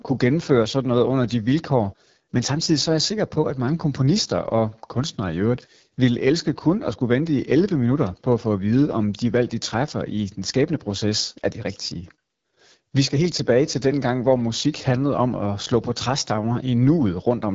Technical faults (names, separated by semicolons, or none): AMR wideband (HD Voice) codec